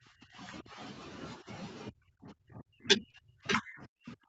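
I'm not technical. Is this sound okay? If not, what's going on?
No, not quite. The main problem is what's called speech suppressed in double talk. The voice drops away at the start, from 0 to about 0.8 seconds, dips briefly around 1.39 to 1.47 seconds, then sinks again from 1.89 seconds to the end, sometimes almost vanishing. That's likely the call's echo canceller: both sides were talking at once, it couldn't tell this voice from the echo of the other person, and it turned everything down.

There's also a short concealed packet loss from about 3.11 to 3.15 seconds. A tiny slice of the call, around two hundredths of a second, arrived too late, so the receiving end patched the gap by stretching out the sound just before it and blending back in. You'd hear it as a quick smear or blip, and a short sound there could get swallowed.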